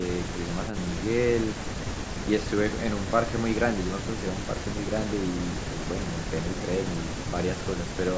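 No technical faults can be heard: the speech has passed through a call's microphone processing, which rolls off the lowest bass and leaves nothing above 8 kHz, as expected for that path.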